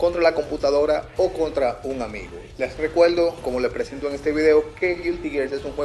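Nothing here needs flagging, as there's no technical fault to point to anywhere in the sound.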